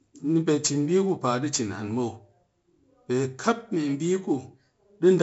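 Across the whole speech recording, 4-bit ADPCM compression is audible. Each sample is coded as a coarse step from a predicted value, and here the damage is heavy: a gritty hiss rides on every loud syllable and falls away in pauses, with roughness on sharp onsets where the adapting step lags. Nothing remains above 7.7 kHz, which fits a 16 kHz rate and a 64 kbps stream. A spectrogram shows level-tracking broadband noise and an abrupt ceiling.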